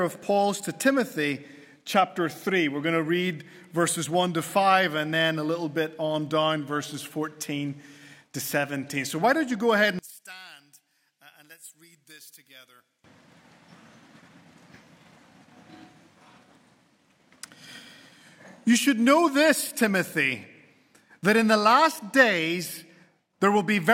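From 9.99 s to 13.04 s, one stereo channel has most likely been inverted in polarity, so when left and right are combined to mono, whatever they share cancels instead of adding. The sound drops by about 23 dB and turns into a faint residue, because only the small differences between the two channels survive. Centred material all but disappears until full level returns at 13.04 s.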